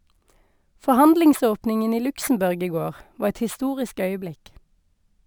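Imaging from sample-and-hold upsampling runs throughout. Samples were repeated unsmoothed, so mirrored speech fizzes metallically from 12 to 24 kHz, about 24 dB down.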